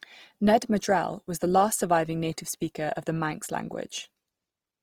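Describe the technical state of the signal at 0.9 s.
At 0.9 s the speech is rough, grainy and noisy rather than swirly, and this runs through the whole clip. The top end stays present. The likely cause is Opus compression in music mode, fitting a rate near 24 kbps. Starved bands are filled with folded or noise content.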